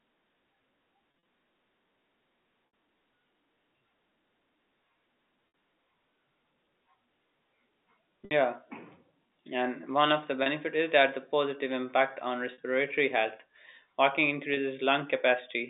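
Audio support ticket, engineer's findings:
Packet loss with pitch repetition at 1.11–1.25, 2.67–2.73, 5.48–5.54, 8.25–8.31, 10.43–10.46, 12.53–12.58 and 14.54–14.57 s. Gaps of 30–60 ms, plus 90 ms scattered at 1.11 s, are bridged by a repeated last pitch period, giving brief buzzy held tones. This fits 10 ms packets. The G.711 A-law telephone band of 250 Hz to 3.7 kHz is audible throughout.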